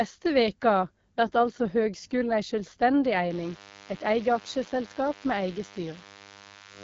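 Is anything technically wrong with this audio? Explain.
Yes, there are two problems: low-rate wideband phone coding across the whole clip, and an interference buzz in the second half.

Throughout, the speech carries AMR wideband (HD Voice) codec damage at 8.85 kbit/s, one of the lowest rates, and the distortion is plainly audible. The codec rebuilds speech from a pulse-excited vocal tract model, and at this rate the pulses are coarse, so voiced sounds turn rough and raspy. Nothing is present above 7.5 kHz. That wider band, with noise-like sibilance at the top, separates it from narrowband telephone coding, which stops near 3.4 kHz.

From 3.31 s to the end there is a DECT cordless phone buzz, about 25 dB below the speech. A DECT handset or base sends a short radio burst every 10 ms, and the audio circuitry rectifies it, giving a thin, steady buzz at 100 Hz with a dense stack of harmonics. 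Mains hum sits at 50 or 60 Hz and sounds smoother, with fewer upper harmonics. This buzz sounds harsher and starts partway through.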